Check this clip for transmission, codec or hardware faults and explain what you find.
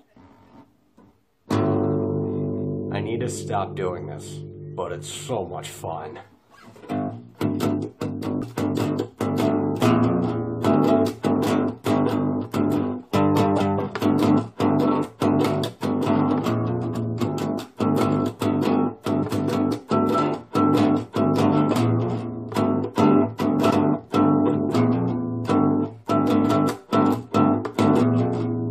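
There are faults: three brief bursts of damaged data in a compressed stream, at 8.42 s, 19.22 s, and 23.70 to 23.72 s. At each point some of the coded bytes were wrong, so the decoder misread or discarded those frames and lost sync until it found a valid frame header again. Each burst lasts under about 20 ms and sounds like a short chirp, squawk, click or short hole. A plain dropout would be silence, and an electrical click is a single sharp spike.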